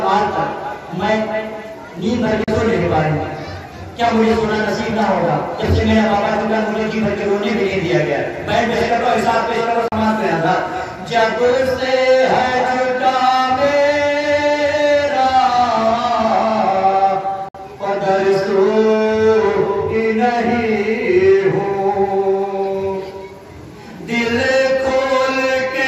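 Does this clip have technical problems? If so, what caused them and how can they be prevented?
Yes. Bluetooth dropouts, likely from packets not reaching the headphones in time, cut the audio to silence at 2.44 s and 9.88 s (about 37 ms each) and 17.49 s (56 ms). Sound then resumes as though it had kept playing. Keeping the source close, with a clear line of sight and less 2.4 GHz interference, prevents this.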